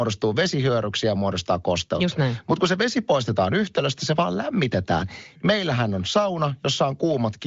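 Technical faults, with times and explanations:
No technical faults are audible anywhere in this speech clip. It has come through the AMR wideband (HD Voice) codec at a high rate, around 23 kbit/s, with little or no sign of coding damage and a spectrum that stops at about 7.5 kHz.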